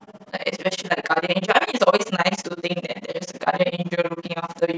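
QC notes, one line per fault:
Throughout: overlap-add ripple, speech level pumping about 60 dB once per frame at roughly 15 Hz, since the frame overlaps fail to sum to constant gain, producing rough flutter.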